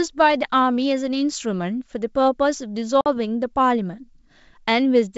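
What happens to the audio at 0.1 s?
Nothing goes wrong at 0.1 s: the speech passes through intact, carried by G.722 wideband telephone coding at 64 kbit/s with at most a faint trace of its upper-band hiss.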